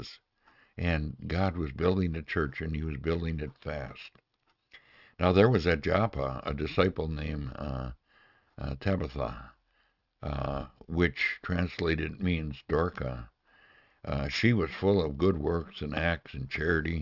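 Aliasing runs through the whole clip: high-frequency content has folded back around 6 kHz into gritty, metallic, unrelated tones, and the spectrum stops hard at that edge. This points to a sample-rate reduction to 12 kHz without an anti-alias filter, leaving the folded components roughly 25 dB below the signal.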